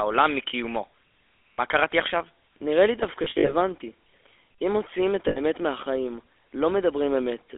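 Speech heard through the GSM full-rate codec, whose buzzy, gravelly roughness and band limited to about 300 Hz to 3.5 kHz fit the 13 kbps GSM full-rate codec. The roughness comes from pulse-driven excitation rather than from low-bitrate smearing or warbling, which sets it apart from a clean narrowband phone line. Lost GSM frames cause brief metallic rings at 1.53–1.60 s (60 ms) and 5.28–5.39 s (80 ms), each consistent with a few 20 ms frames. Between 3.24 and 3.54 s the losses come in scattered bursts totalling 140 ms, the longest around 70 ms. Each gap holds the last good sound as a fading ring rather than dropping to silence or clicking, which separates these lost frames from plain dropouts.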